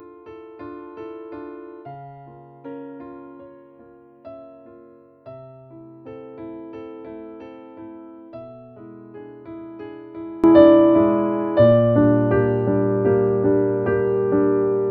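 From the start until 10.44 s, the sound is faint and distant when played in mono, with the centred content and the low end nearly gone and the overall level down by about 24 dB. Only a faint residue is left. At 10.44 s the full, solid sound returns. The likely cause is one channel inverted: one stereo channel has its polarity flipped, so everything shared by left and right cancels when they are summed to mono.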